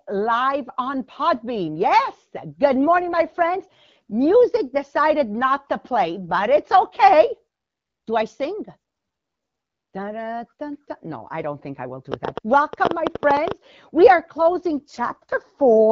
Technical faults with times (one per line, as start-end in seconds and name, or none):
2.66-4.12 AMR rate drop
12.12-13.52 train of clicks
14.38-15.91 AMR rate drop